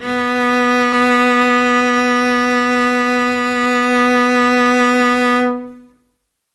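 At 0.92 s the music jumps forward in a skip ahead. Roughly half a second of audio is simply gone, and the two sides are butted together with no silence and no fill. A dropout would leave an audible gap or a burst of concealment noise. Here the only cue is a sudden discontinuity in the musical line, as if an edit had been made, and the following material arrives earlier than expected.

Straight after, from 1.01 s to 1.98 s, a jitter buffer speed-up runs the music at about 111% of its proper rate. Once late audio had piled up, the receiver trimmed tiny pitch-period-sized slices again and again, shedding something like a tenth of a second in total. The tempo pushes ahead and feels rushed, but the pitch stays put. That sets it apart from a resampling or clock error, which would raise the pitch along with the speed. The whole passage has the band-limited character of an Opus call path, with nothing above about 12 kHz.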